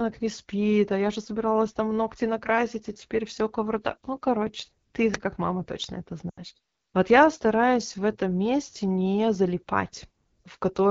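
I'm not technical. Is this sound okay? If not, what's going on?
No. AMR wideband (HD Voice) codec: for the whole clip the speech is squeezed through a phone-network HD Voice codec at one of its lowest quality settings. It rebuilds speech from a simplified model of the voice, so it sounds rough and raspy throughout.

Uninitialised buffer: at 5.14 s, just after "короче ты", there is a very short, loud crack lasting about 5 ms. The player output a chunk of memory before any real sound had been written into it, so leftover data came out as a crackle.

Lost AMR speech frames: from 6.29 to 6.40 s, right after "как мама точно это", about 80 ms of speech goes missing, which fits a run of four lost frames. The decoder reuses the last good sound and fades it to near silence within two frames, so speech briefly drops out and returns weak or rough.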